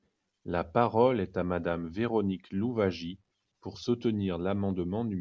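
A short bit of speech, and nothing technically wrong turns up anywhere in it.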